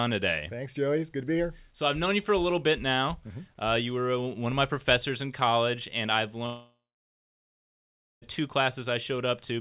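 A speech recording carried over a call link band-limited to 4 kHz, the clip most likely suffers a long network dropout from 6.46 s to 8.24 s, when incoming audio stopped for about 1.76 s. The receiver briefly extends the last sound as a fading buzz or hiss, then for about 1.45 s leaves only silence or faint steady noise. The speech then resumes with the lost portion simply absent.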